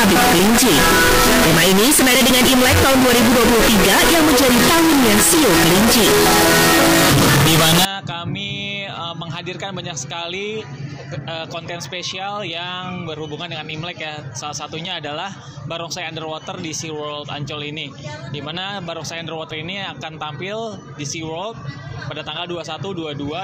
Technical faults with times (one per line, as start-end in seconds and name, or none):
0.00-7.85 float read as integer